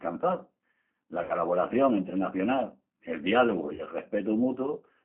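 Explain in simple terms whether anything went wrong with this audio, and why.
Two things went wrong here. First, the whole speech clip has gone through the G.729 codec, a squeezed-down phone-call codec that rebuilds the voice from a rough model of the throat and a handful of pulses instead of sending the real waveform. That's why it sounds a bit rough and synthetic all the way through, and why it's boxed into a narrow phone band, with nothing much below 200 Hz or above 3.5 kHz. The codec damage is plainly audible.

Second, there are two spots of VoIP packet loss concealed by the speech codec. Around 1.23 to 1.33 s, about 60 ms of audio went missing, and the decoder covered the gap by stretching out what it last heard into a fading buzzy tone or noise. The same thing happens from 3.74 to 3.82 s, right after "el diálogu", where about 40 ms was lost. Because the codec builds each bit of sound on the previous one, the voice stays weak or off for a moment after each gap.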